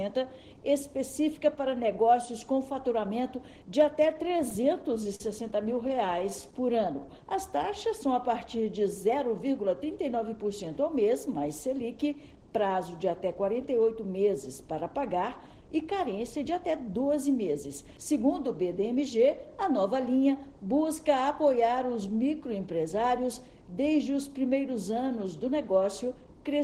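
From 4.06 to 5.21 s there's a run of repeated stalls (stutter). The jitter buffer kept running dry, and the receiver stretched the last sound over eleven small gaps, the longest 45 ms. Nothing's actually lost, but it drags. It happens again with six tiny hitches from 5.64 to 6.21 s.

Right after, from 6.30 to 7.07 s, a jitter buffer slow-down rebuilds the reserve by repeating pitch periods. That adds 82 ms, so the sound runs at 90% speed with the pitch unchanged.

Then there are two jitter buffer speed-ups where the buffer had too much queued and trimmed pitch periods. From 9.09 to 9.83 s it runs at 110%, cutting about a tenth of a second. From 21.13 to 21.54 s it runs at 108%, cutting roughly 40 ms. Both sound hurried.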